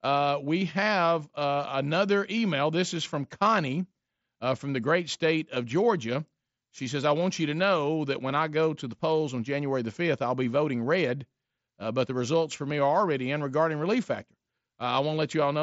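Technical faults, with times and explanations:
No technical faults; the speech sits within a band topping out near 8 kHz with only a faint grain on louder syllables, consistent with an mSBC Bluetooth headset link.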